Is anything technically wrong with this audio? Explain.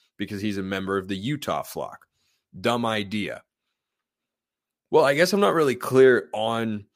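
No technical faults are audible.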